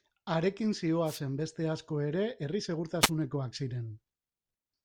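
Wireless microphone noise hits at 1.05 to 1.20 s and 3.01 to 3.10 s interrupt this speech clip with brief static swishes, as the FM radio signal fades through reflection cancellation and receiver noise rises over it.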